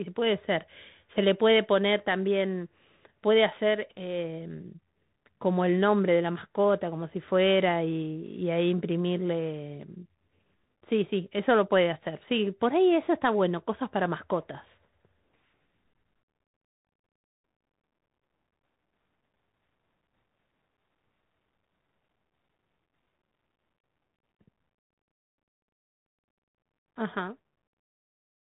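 Across the whole clip the speech comes through a Bluetooth CVSD headset codec. Nothing above 3.8 kHz survives, so it sounds narrow and boxy. The one-bit delta coding, at a rate consistent with 64 kbps, cannot track fast loud changes. S sounds turn scratchy, and a grainy hiss sits underneath.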